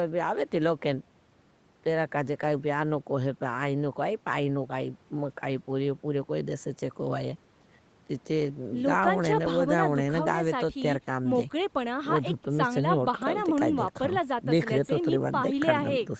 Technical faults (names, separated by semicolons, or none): none